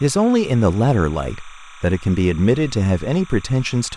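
Speech with timecode bleed running the whole length: a steady chirping warble sits roughly 25 dB under the voice, flipping between tones near 1 and 2 kHz. That is linear timecode at 29.97 frames per second leaking in from an adjacent track or cable.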